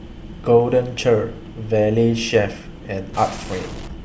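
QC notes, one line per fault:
3.14–3.88 s, stuck bit: harsh, buzzy distortion over a raised noise floor, likely one data bit stuck, knocking many samples off by a step of about -30 dBFS.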